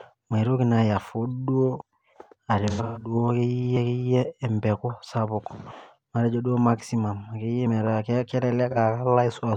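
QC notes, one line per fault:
1.82 s, 3.77 s, 7.67 s: audio missing between chunks. Each is a sudden skip where roughly 50 ms of sound is gone and the two sides butt straight together with no gap of silence, so the flow jumps forward abruptly. The skips fall at spacings that fit a recorder or processor working in 2-second chunks. The likely cause is a short piece of audio dropped each time one chunk closes and the next opens.
2.70–3.15 s: AAC frame loss with concealment. The sound turns smeared and noisy in several patches. About 256 ms of audio is missing in total, spread over roughly 341 ms, and the longest unbroken stretch is around 150 ms. That pattern fits about six lost frames. The decoder fills each gap by reusing the last good spectrum, which is what produces the hazy, phasey texture in place of clean detail.
8.71 s: AAC frame loss with concealment. This is a brief, smeared blip of about 43 ms, which points to a single lost frame. 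The decoder patched the gap from the preceding spectrum, so a short smear replaces the real sound instead of a clean dropout.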